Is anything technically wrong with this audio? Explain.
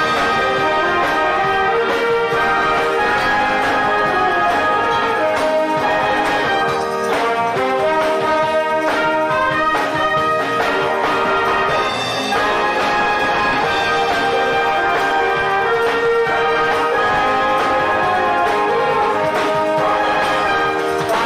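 No, nothing here stands out as a technical problem, so there's nothing to flag.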